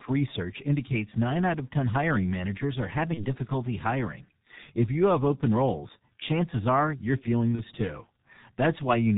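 Throughout, the speech passes through the G.723.1 codec, heavily damaged at a rate that fits about 6.3 kbit/s, leaving it muffled, hoarse and band-limited below 4 kHz with smeared consonants. At 3.14 to 3.25 s and again at 7.55 to 7.63 s, VoIP packet loss concealed by the speech codec appears. The decoder bridges about 30 ms of missing audio by extrapolating, so the sound briefly turns into a buzzy tone or coloured noise that fades before recovering.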